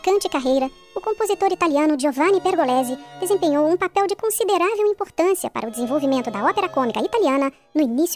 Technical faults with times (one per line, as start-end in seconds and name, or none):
0.00-8.16 wrong sample rate